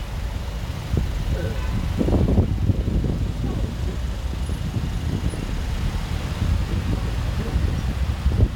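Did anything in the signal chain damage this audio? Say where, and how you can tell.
No, nothing along the chain has left a mark on these sounds that I can hear, so there's no damaged stage to point to.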